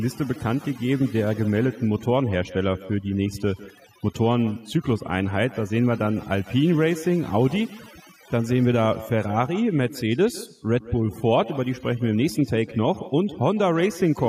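From the first second to the end, the speech carries overdone noise removal. A noise reducer set far too hard is switching individual frequency bands down or off whenever they sit close to its noise estimate, and the quieter parts of the voice are being taken out along with the background noise. The pauses fall to near silence dotted with twinkling specks. Codec smearing can sound similarly swirly, but this points to a noise reducer because the gaps are hollowed out and the background breaks up into specks.

Running alongside it for the whole clip is echo with no canceller. The far end is playing the call through a loudspeaker, its microphone captures that playback, and nothing cancels it, so every phrase returns after the network round trip, roughly 150 ms later and about 18 dB below the direct speech. The copy is quieter and thinner. It is a distinct delayed repeat rather than the smooth tail of room reverberation, and that separate return is what sets it apart from a reflective room.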